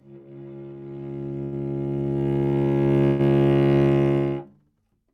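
At 1.43 s, a short stall from a late packet holds the sound until 1.54 s, about 87 ms, with a slight buzz or dip. The jitter buffer ran dry, the last sound was stretched, and playback resumed from the same point, so nothing is lost but everything after runs 87 ms later.

From 3.06 to 3.21 s comes a call audio freeze: a longer 130 ms fill where the held sound turns to a fading buzz or hiss, never reaching silence. The likely cause is delayed packets emptying the buffer. It differs from the earlier stall by its length and audible fade, and it too pushes the sound later rather than cutting any out.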